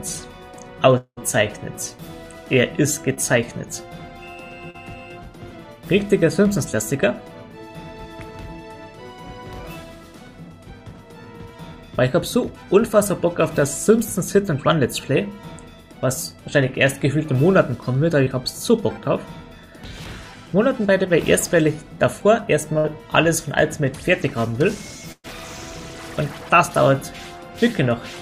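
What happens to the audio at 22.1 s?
Nothing goes wrong at 22.1 s; the audio carries on intact through that moment.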